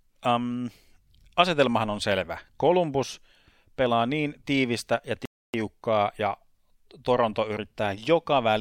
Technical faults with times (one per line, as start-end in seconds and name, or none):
5.25-5.54 playback stall